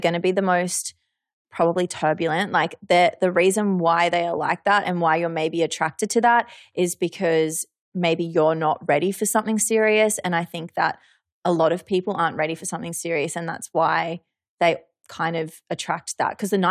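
No technical faults are audible.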